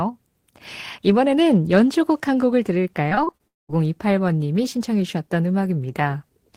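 From 3.09 to 3.41 s the speech turns choppy and robotic, with about five brief holes of at most 25 ms each smoothed over by repeating the preceding sound. This is repeated packet loss: audio arriving late or not at all, with roughly a third of the stretch concealed.

Shortly after, from 3.47 to 3.71 s, the sound smears into a fading buzz and then about 200 ms of near silence before speech resumes with a piece missing. This is likely a long network dropout, with about 220 ms of audio lost.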